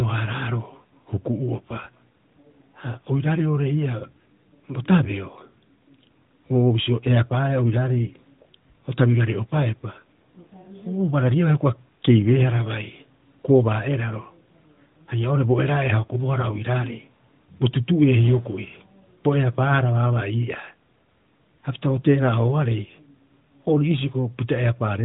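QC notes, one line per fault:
Nothing stood out on listening to this speech clip.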